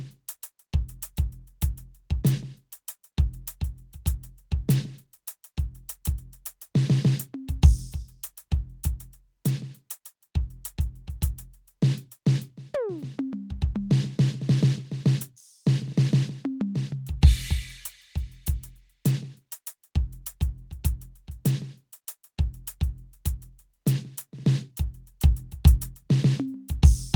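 A piece of music with no technical faults to report. No dropouts, clicks, distortion or other disturbances can be heard anywhere in it.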